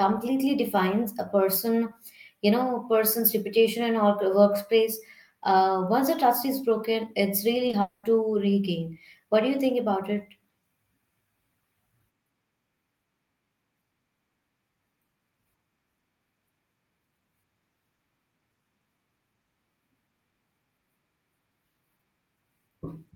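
Short concealed packet loss occurs twice in a row, from 7.67 to 7.71 s and again from 7.71 to 7.75 s. Each time about 20 ms of the speech failed to reach the decoder in time, and the receiver patched the gap by extending the preceding sound before blending back into the real signal. Back to back, the two patches make a brief smeared wobble lasting about 80 ms, where the speech loses its crispness for an instant.

A long network dropout is the likely cause of what follows, from 7.81 to 8.05 s. For roughly a quarter of a second the original speech is absent, and the whole 220 ms gap is filled with a continuation of the last sound rather than left silent. It comes across as a stretched buzz or hiss that fades before the speech resumes, with the original content of that stretch simply missing.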